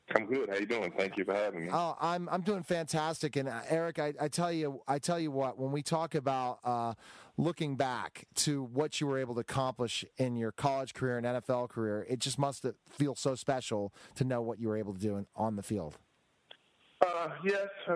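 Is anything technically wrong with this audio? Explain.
No, the signal holds steady throughout, with nothing in the level, timing or frequency content that points to a fault in recording, processing or playback.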